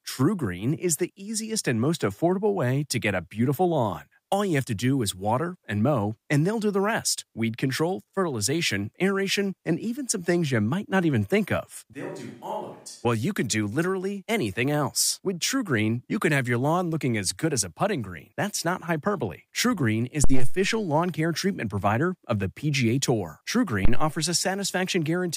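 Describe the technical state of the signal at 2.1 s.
At 2.1 s the speech signal is intact, with no dropout, clipping, glitch or other fault audible at that moment.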